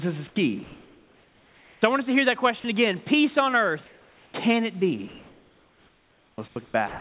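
The voice detector at the sender likely misjudged the tail after "this is" as background and stopped sending, so at 0.28 to 0.36 s about 50 ms of speech gives way to flat comfort noise. The same happens again after "us to hear that" at 2.6 to 2.64 s, where 40 ms is lost. With no speech detected, the sender likely switched to discontinuous transmission, and the receiver synthesised comfort noise in place of the background. From 0.64 to 1.82 s, between "this is" and "I want us to", the real room hiss becomes a smooth, featureless noise about 1 dB quieter. From 3.86 to 4.34 s the substitute is about 3 dB quieter. From 5.08 s to the end, the detector likely toggled repeatedly, which is sound chopped by the voice detector. About 1.6 s of that stretch is replaced by comfort noise, leaving two or more holes. Throughout, nothing reaches above 4 kHz, consistent with a narrowband telephone codec.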